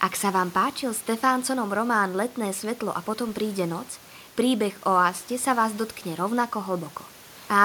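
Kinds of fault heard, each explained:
Nothing stood out on listening to this speech clip.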